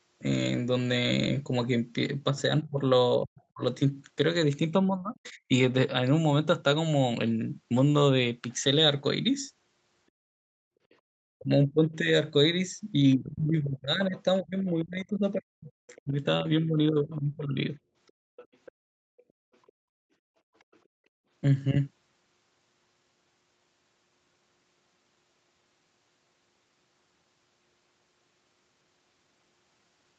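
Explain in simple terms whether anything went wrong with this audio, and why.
Between 2.3 and 5.5 seconds, and again between 11.4 and 17.7 seconds, the talker's voice keeps dipping sharply. This is speech suppressed in double talk. Both people were speaking at once, and the echo canceller likely mistook the talker for loudspeaker echo and turned them down. The cuts add up to about a second in the first stretch and about four seconds in the second.

The other side's voice is leaking through. Faint scraps of a second voice appear at 5.26–5.30, 10.91–10.95 and 14.16–14.20 seconds. A longer stretch runs from 15.9 to 20.8 seconds. It stays quiet, well below the talker. It is likely loudspeaker sound that the echo canceller did not fully remove from the microphone.

From 18.1 to 21.3 seconds, the room sound around the talker drops out deeply at moments, for about one and a half seconds in total. 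This is background gated by the echo canceller. While the loudspeaker played, the canceller turned the microphone down hard, then let go.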